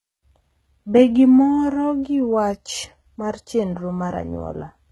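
Speech, with a gritty, metallic treble and nothing above 11.8 kHz throughout, likely HE-AAC compression at a very low bitrate (around 16 kbps), rebuilding highs by band replication.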